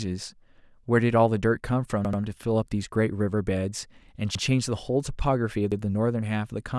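At 2.05 s a repeated buffer stutters: one 85 ms slice plays twice more, then once more each at 4.35 s and 5.72 s, fitting a 2048-sample buffer. Nothing is skipped. The waveform shows identical blocks with abrupt seams, visible as vertical edges on a spectrogram.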